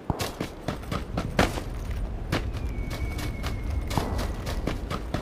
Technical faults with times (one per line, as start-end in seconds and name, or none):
none